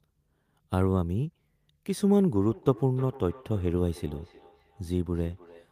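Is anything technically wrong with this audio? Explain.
Yes. From 2.49 s to the end, the speech comes back as a faint, thin, ringing repeat roughly every third of a second, never louder than about 22 dB below the direct sound. This is feedback echo between two devices: two devices in the same room are on one call, one plays back what the other's microphone sent, and that microphone picks it up again. Each device's echo canceller removes only its own playback, so the returning copy passes through.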